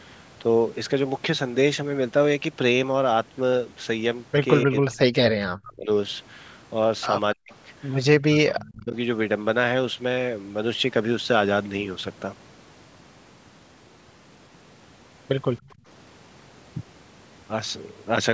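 From 4.65 to 5.9 s, 7.35 to 7.52 s and 8.19 to 8.94 s, the speech dips by up to about 40 dB, likely speech suppressed in double talk as the canceller ducked both talkers. At 7.51 to 7.55 s a faint echo leak follows, a copy delayed 284 ms at about 35 dB below the speech, likely uncancelled loudspeaker pickup sent back. Between 15.66 and 15.85 s the room sound drops by about 18 dB: background gated by the echo canceller, which clamped the microphone while the loudspeaker played, then released.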